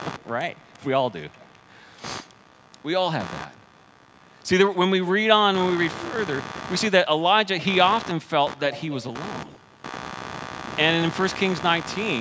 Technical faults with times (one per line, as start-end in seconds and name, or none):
0.00-12.21 computer activity noise
0.18-0.26 echo leak
1.31-1.64 echo leak